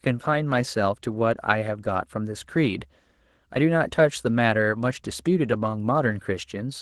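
No technical faults can be heard anywhere in this recording.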